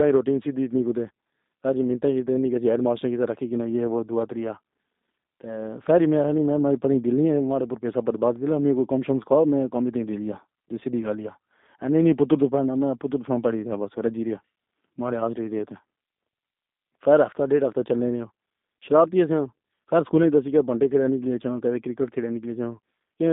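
Throughout, the speech passes through a G.729 codec, which rebuilds each 10 ms frame from a vocal tract filter, a pitch predictor and a few pulses. That fits a rate near 8 kbit/s. The band is confined to 200 Hz–3.7 kHz, with nothing above 3.8 kHz, leaving plainly rough, synthetic speech.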